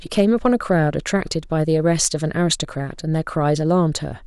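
Hard clipping appears from 0.19 to 0.71 s, with peaks pushed about 2 dB past the limit, giving light crackle on louder speech; at 2.05 s a brief overload of about 6 dB snaps harshly. The waveform shows flattened tops, the spectrogram vertical streaks of high harmonics.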